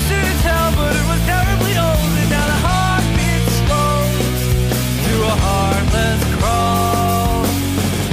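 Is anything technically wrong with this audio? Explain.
No, nothing technically wrong can be heard here.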